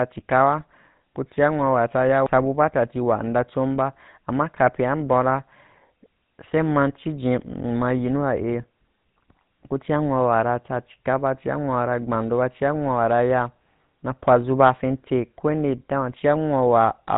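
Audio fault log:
throughout GSM full-rate codec: plainly audible buzzy, gravelly roughness as the speech is rebuilt from a vocal-tract model fed by sparse regular pulses, consistent with a 13 kbps GSM stream; nothing passes above 3.8 kHz. That grain, not mere dullness, distinguishes it from plain low-pass filtering.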